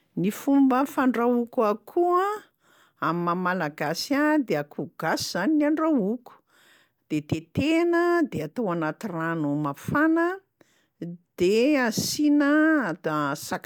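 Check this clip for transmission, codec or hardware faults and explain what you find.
No transmission, codec or hardware faults are audible here.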